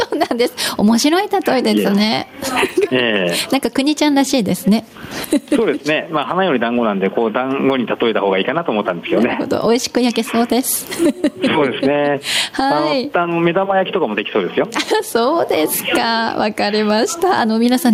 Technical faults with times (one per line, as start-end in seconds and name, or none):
0.00-17.94 gain pumping